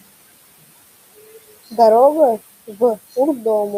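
Noise suppressor artifacts run throughout the speech, cutting the room noise (about 20 dB below the speech) by about 19 dB. The processing lowers bands it judges to be steady noise frame by frame, so the noise sinks between words and rises back under them.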